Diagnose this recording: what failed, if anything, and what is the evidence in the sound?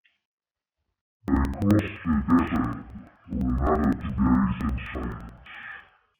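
Sample-format conversion slipped: interleaved audio read as planar throughout, so speech sits an octave low, doubled, chopping every 85.33 ms (11.7 Hz), which fits 4096-sample blocks.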